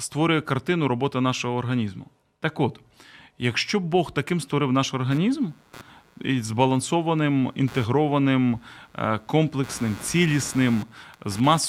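This speech clip suffers from computer activity noise: changing processor, graphics or mouse load disturbed the ground shared with the audio circuit. From 5.11 s, just after "таким створив наш", to the end of the clip, a pulsing interference rides under the speech at roughly 100 pulses per second, around 25 dB below the speech level. It follows the machine's activity rather than the speech.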